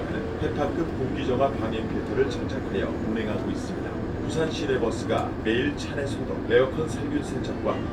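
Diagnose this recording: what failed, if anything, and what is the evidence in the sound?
Nothing in the recording points to a failure at any stage of the chain, and the signal stays continuous and steady throughout.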